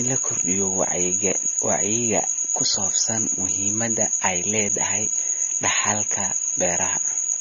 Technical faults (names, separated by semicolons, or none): AAC compression